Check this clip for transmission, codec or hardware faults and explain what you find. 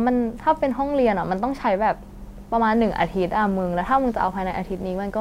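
One hardware fault is present. From 2.74 s to the end, video or display buzz appears: a screen or video cable is coupling into the audio path, adding a 60 Hz field-rate buzz with hash above it, sitting about 25 dB below the speech.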